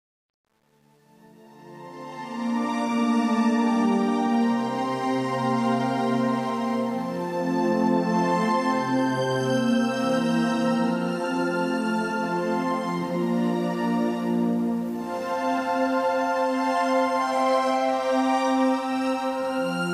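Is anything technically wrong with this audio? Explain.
Yes. From 0 to 2.74 s, as the sound fades in from the very start, the quiet opening is gritty and grainy, worst between 0 and 1.97 s. This is truncation distortion on a fade: the fade was rendered with no dither at a resolution near 9 bits, so the low-level waveform collapses into a few coarse steps. Only once the level climbs does the fade-in turn smooth.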